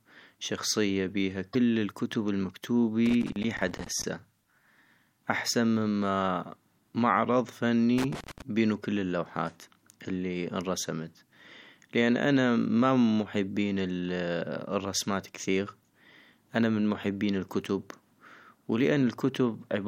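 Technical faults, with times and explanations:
1.53–1.55 s, broken MP3 bit reservoir: The cause is likely a cut in the MP3 stream. Frames were dropped, and the next frame went looking in earlier frames for the data it had stored there and picked up bytes belonging to another frame. What you hear is a garbled glitch of about 26 ms, roughly one 24 ms frame's worth, where the speech jumps ahead instead of flowing on.
3.06–4.04 s and 7.98–8.42 s, loose connector crackle: A contact somewhere in the signal path is making and breaking rapidly, probably a worn or dirty plug shifting in its socket. Each break chops the signal and each reconnection snaps it back, so the speech is overlaid with an irregular scratchy crackle. The first burst lasts about a second and the second about 0.4 s.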